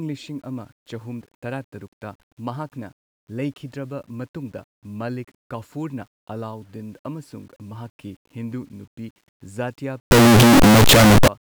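A speech recording where, from 10.11 to 11.28 s, the samples were likely read with their sign convention swapped, signed and unsigned mixed up on what sounds like 8-bit data, so the top bit of every sample flips. Each zero crossing becomes a leap across the full range, and the speech turns into a very loud, harsh, buzzing distortion in which quiet moments blare as loudly as the rest.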